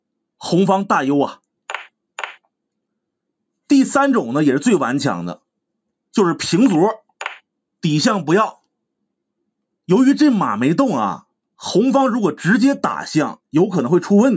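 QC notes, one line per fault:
No faults found; the band stops at 8 kHz and the lowest bass is trimmed, both consistent with normal call microphone processing.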